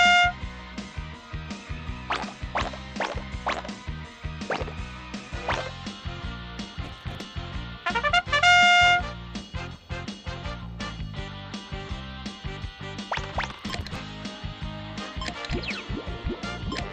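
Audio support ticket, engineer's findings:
Processor overload crackle, 6.84–7.25 s. CPU missing audio-buffer deadlines again and again, short buffers of around 5 ms, a few dozen skipped. Each miss drops a hard-edged gap; the run sounds like gritty tearing over the audio.

Processor overload crackle again, 13.51–13.99 s. Same mechanism, slightly longer: several dozen 5 ms buffers skipped over the stretch. Dense crackle burst, stops cleanly when load drops.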